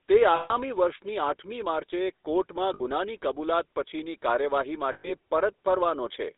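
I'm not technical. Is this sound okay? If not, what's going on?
No, it has two problems. The whole recording has been through the GSM full-rate codec, the compression used on early mobile phones. It rebuilds the voice from a rough model driven by a pulse train, so the speech comes out buzzy and gravelly, and here that roughness is easy to hear. It also cuts everything outside roughly 300 Hz to 3.7 kHz, which gives it that thin phone-line sound.

On top of that there are three spots with lost GSM frames, where bits of the signal never arrived and the phone stretched out the last good sound to cover the gap. You hear a short metallic, ringing smear at 0.36 to 0.52 s (about 140 ms), at 2.74 to 2.81 s (about 60 ms, just before "ગુનાની કબૂલાત"), and at 4.92 to 5.12 s (about 120 ms).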